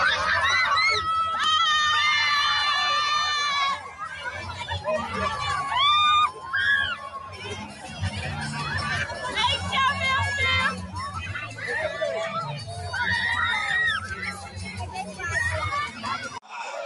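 A noise suppressor applied to music or sounds runs throughout. Built for speech, it treats sustained material as noise and rides the level up and down by around 5 dB, so the sound pumps and thins.

Sound cut by the noise suppressor occurs at 3.85–4.28 s (down about 6 dB), 6.96–8.02 s (about 7 dB), 11.46–11.63 s (about 7 dB), 12.59–12.86 s (about 7 dB), 14.03–15.21 s (about 8 dB), 15.88–16.05 s (about 6 dB) and 16.24–16.55 s (about 10 dB). In each, steady or decaying sound is mistaken for noise and pushed down, sinking audibly or having its tail clipped short.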